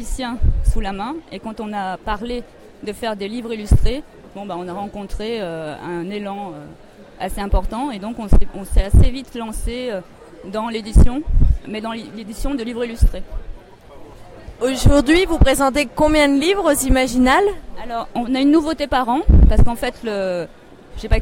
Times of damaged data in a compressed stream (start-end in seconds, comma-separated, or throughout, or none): none